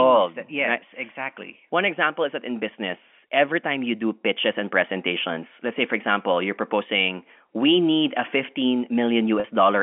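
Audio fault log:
3.20–3.22 s and 9.40–9.44 s, packet loss with pitch repetition: 20 ms and 40 ms gaps, fitting one and two lost 20 ms packets, bridged by looping the last pitch period, giving a brief held buzz. Waveform shows identical repeating cycles; spectrogram shows frozen, flat harmonics within the 200–3400 Hz telephone band.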